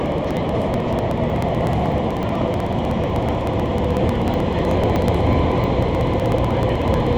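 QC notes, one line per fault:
0.06–7.13 s, periodic USB or driver dropouts: steady ticking every 0.062 s, as a background task stalls the driver and about 2 ms of audio is skipped each time.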